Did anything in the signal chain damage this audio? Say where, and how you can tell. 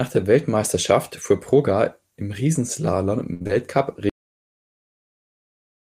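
Yes. A burst of packet loss at 3.33–3.42 s in the network: the receiver extends and fades the last sound for 70 ms, then resumes with 60 ms missing.

Short concealed packet loss at 3.42 and 3.47 s, also in the network: two brief smears where the decoder synthesises roughly 29 ms and 18 ms before blending back.

A cut-off end at 4.10 s, at the buffer or storage stage: the final buffers were never written, so the sound stops mid-sound into digital silence.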